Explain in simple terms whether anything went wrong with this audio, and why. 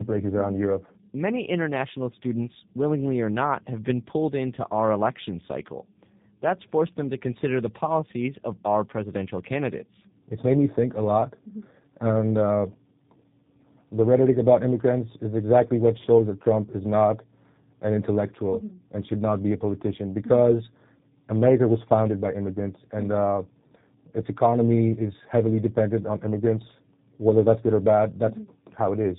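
The speech sounds rough, muffled and warbly from start to finish, with nothing above 3.7 kHz. This is tandem speech coding: the call passed through two different speech codecs in a row, each squeezing the already-squeezed sound again, so the damage adds up.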